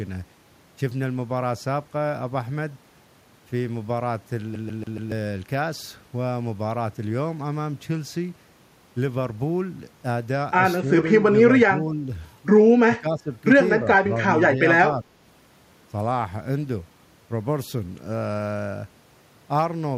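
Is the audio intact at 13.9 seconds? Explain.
No, the speech around that point has just come through a brief, shallow dip. From 13.76 to 13.87 s, roughly a tenth of a second, the level sags by around 5 dB before recovering. This is speech suppressed in double talk, likely caused by an echo canceller that, with both sides talking at once, could not separate the near talker from loudspeaker echo and turned both down together.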